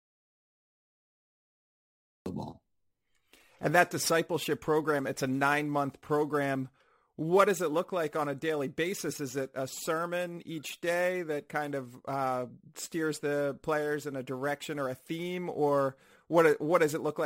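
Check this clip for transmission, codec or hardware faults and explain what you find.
There is one fault, an audio dropout to silence at the very start. From 0.00 s the clip is already dead silent, and speech only comes in at 2.26 s, cutting in mid-flow. The input was likely lost and silence was written in its place. On a waveform this is a flat line. On a spectrogram it is a completely blank band with no room-tone floor, ending in an abrupt vertical onset.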